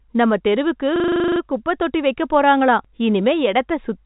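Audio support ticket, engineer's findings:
System hang loop, 0.96–1.4 s: after "நம்ம தெருவுக்கு", one 40 ms fragment repeats exactly 11 times, a buzzing stutter at 25 Hz. Host or driver froze while the audio hardware kept replaying its ring buffer. Playback resumes at "குப்பை தொட்டி வைக்கப் போறாங்களாம்" with virtually nothing lost. Band limit at 3.8 kHz from the G.711 A-law telephone path.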